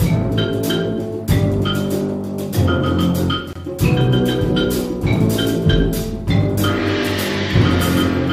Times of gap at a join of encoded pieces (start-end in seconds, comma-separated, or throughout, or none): 3.53-3.55